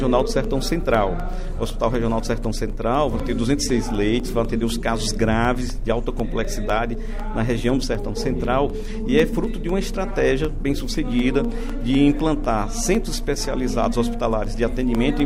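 From 0.20 s to 15.20 s, a steady tick repeats every 0.25 s, about seventy in all, each a tiny gap of roughly half a millisecond. These are periodic USB or driver dropouts: a recurring stall in the driver or bus drops audio and leaves brief silence.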